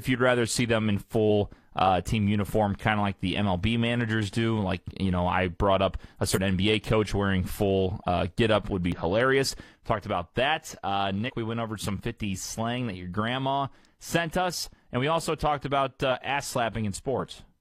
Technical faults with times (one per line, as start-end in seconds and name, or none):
6.32-6.38 damaged data in a compressed stream
8.92 damaged data in a compressed stream
11.24-11.31 damaged data in a compressed stream